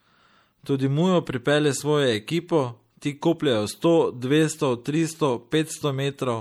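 MP3 compression artefacts run through the whole speech clip. The treble stops abruptly, and weak detail flickers in and out between frames, giving a watery, swirly texture with metallic chirps on s sounds. The likely cause is an encoder short of bits, fitting roughly 64 kbps.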